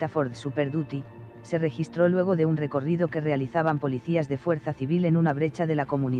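No technical faults can be heard anywhere in this audio.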